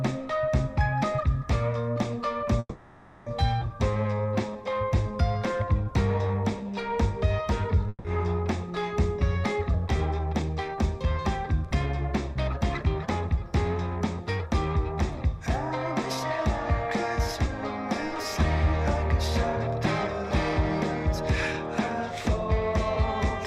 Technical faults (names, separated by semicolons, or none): call audio freeze; skip ahead; jitter buffer slow-down; long network dropout; jitter buffer speed-up